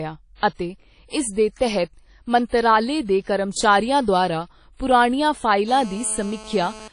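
Throughout the speech there is a ringing, washy quality with a hiss that rises and falls with the voice, and nothing is present above 10.1 kHz. The likely cause is WMA compression at a low bitrate, around 32 kbps. Coarse quantisation in long transform blocks spreads noise over tens of milliseconds and drops weak spectral lines, so the damage is plainly audible. Unlike plain band-limiting, the noise itself pumps with the signal.

Pre-echo appears four times. The first runs from 0.54 to 0.59 s, spreading 52 ms just before "ਇਸ ਦੇ ਤਹਿਤ". The second runs from 2.47 to 2.52 s, spreading 49 ms right after that phrase. The third is at 3.23 to 3.27 s (37 ms) and the fourth at 4.76 to 4.80 s (31 ms). Each time a sharp onset sits late in a codec block, so noise sized for the loud part leaks into the quiet gap ahead of it. A brief hiss runs in front of the attack and softens it. Reverb or echo trails after a sound, whereas this hiss arrives before it.

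GSM phone buzz starts at 5.68 s, just after "ਦੁਆਰਾ ਪੁਰਾਣੀਆਂ", and lasts until 6.88 s. A nearby 2G handset on a call pulses its transmitter 217 times a second, and the audio circuit rectifies those bursts. The result is a hard, raspy 217 Hz buzz rich in harmonics, about 19 dB below the speech. It stays steady and ignores what the voice does. Its pitch and rasp set it apart from 50 or 60 Hz mains hum.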